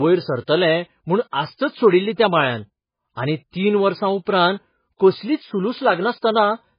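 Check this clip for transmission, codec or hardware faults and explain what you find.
One codec fault runs through the whole recording. The speech sounds watery and swirly, so s sounds lose their edge and turn chirpy. The likely cause is heavy MP3 compression at a very low bitrate, around 16 kbps. Starved of bits, the encoder kept zeroing weak frequency lines, which flicker on and off from frame to frame.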